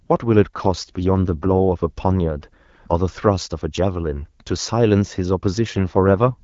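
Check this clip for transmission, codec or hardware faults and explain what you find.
Two AMR rate drops are audible in this speech. The first runs from 0.56 to 2.70 s. The second starts at 5.55 s and lasts to the end. In both, the voice turns rougher and more synthetic. The band stays the same, and nothing drops out. The network has lowered the AMR wideband rate to spend bits on error protection over a weak radio link. The change fits a step from 12.65 down to 8.85 kbit/s. Outside these spans, the HD Voice codec adds only light coding damage.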